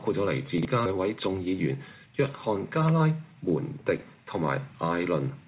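Chunks out of order at 0.58 to 0.65 s and again at 3.97 to 4.02 s: blocks of about 23 ms play behind the ones that should follow them, two blocks late the first time and one the second. Each brief jumble leaves three hard joins. A skip ahead at 0.86 s drops around 0.4 s of audio with no fill, so playback jumps straight to later material that was already waiting and the two sides butt together. A jitter buffer speed-up follows from 0.96 to 3.08 s: with excess audio queued, the receiver repeatedly cuts short pitch-period pieces, about 0.2 s in total, so the sound runs roughly 8% fast at unchanged pitch and feels hurried. Throughout, the call codec's band limit leaves nothing above 4 kHz, which points to G.711 mu-law.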